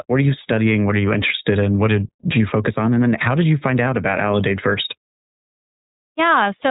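Throughout, the speech carries iLBC codec damage. Nothing passes above 3.8 kHz. Each 20 ms frame is coded alone, leaving a plainly rough, synthetic edge.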